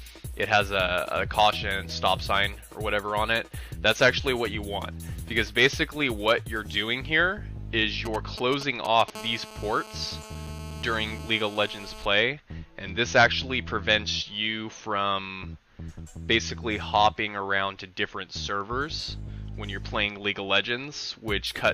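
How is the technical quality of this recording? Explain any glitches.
The recording carries radio-frequency interference from a nearby 2G mobile phone in two consecutive stretches.

From 8.05 to 9.10 s there are GSM signalling bursts: a galloping dit-dit-dit run of ticks and short buzzes, around 10 dB below the signal. A phone handling network signalling transmits brief groups of radio pulses, and some stage of the audio circuit rectifies them into audible clicks, with the pulse rate of about 217 Hz giving each tick its buzzy tone.

From 9.15 to 12.06 s the interference turns into a steady GSM phone buzz, a hard, raspy tone at 217 Hz with many harmonics, about 17 dB below the signal and unrelated to it. This is the pattern of a phone in an active call, transmitting continuously in bursts 217 times a second. The audio electronics demodulate that pulse train into a constant buzz until the transmission stops.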